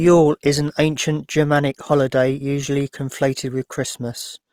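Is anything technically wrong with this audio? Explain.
Yes. Throughout, the speech sounds grainy, rough and noisy, most likely from Opus compression whose music mode fills bit-starved bands with folded content or noise, which fits roughly 24 kbps.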